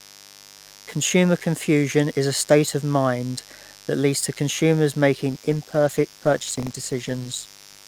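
Speech with a 50 Hz mains buzz running the whole way through at about 25 dB below the voice. Switching spikes twice per mains cycle spread energy into harmonics reaching several kHz, so a spectrogram shows an evenly spaced comb of horizontal lines at multiples of 50 Hz under everything. From 5.31 s, right after "that leads to consumers", to the end, a call bitrate drop makes the speech rough and muffled. This fits the encoder falling from about 64 to about 18 kbps after the bandwidth estimate collapsed, and the spectrogram loses its upper band abruptly, leaving smeared, blocky detail below. From 6.38 to 6.71 s, processor overload crackle tears through the sound. Roughly fifteen buffers of under a millisecond each missed their deadlines and replayed old audio, so the waveform shows a cluster of tiny hard-edged discontinuities, seen on the spectrogram as thin vertical broadband streaks.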